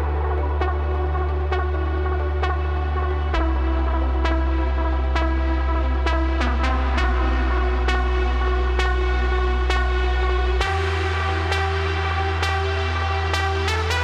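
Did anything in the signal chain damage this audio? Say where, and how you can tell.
No, nothing in the chain damaged it.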